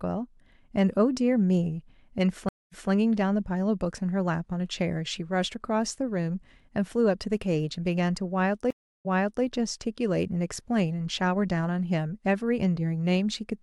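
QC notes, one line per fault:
2.49–2.90 s, stream reconnect: the speech drops out for about 228 ms, then resumes 186 ms earlier than where it stopped, so a short stretch repeats. The link broke and the player restarted its decoder mid-stream, using a resent burst.
8.71–9.44 s, stream reconnect: a longer gap of about 344 ms, after which the speech restarts 395 ms back and that passage is heard twice. Again the connection failed, a fresh decoder began, and the server resent buffered audio.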